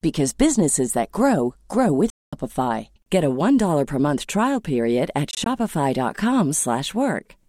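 Audio packets likely failed to reach the headphones in time and were discarded, a Bluetooth dropout. From 2.10 to 2.33 s the speech cuts to silence for about 224 ms, a gap consistent with roughly a dozen lost packets, then resumes further along, as though it had kept playing. From 5.31 to 5.46 s the losses are scattered: 56 ms missing across about 150 ms, none longer than 19 ms, giving a brief stuttering chop.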